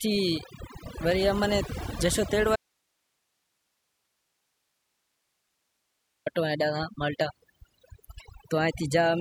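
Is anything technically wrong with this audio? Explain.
Yes. Two faults are audible.

Throughout the speech, there is overdone noise removal. The noise reduction was set too hard. It pulls individual frequency bands down whenever they sit near its noise estimate, taking soft parts of the voice too. The background becomes near silence flecked with twinkling specks.

From 2.56 to 6.26 s, about 3.7 s, there is an audio dropout to a faint residue. The speech cuts out abruptly and then returns just as abruptly. Only hiss remains, far below the speech level. This is likely a lost signal feeding a path that stayed live.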